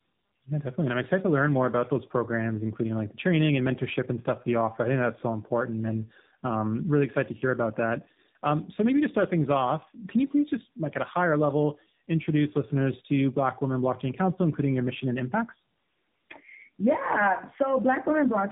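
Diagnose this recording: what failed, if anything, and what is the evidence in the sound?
The fault sits at the codec stage, and it's tandem speech coding running the whole length of the speech. The band stops at about 3.8 kHz, and the roughness, muffling and warble sound like two low-rate speech coders in a row rather than one. The character fits a G.729A-style coder, then a G.711 hop, then AMR-NB. Each transcode has to code speech that's already been mangled, so the errors pile up.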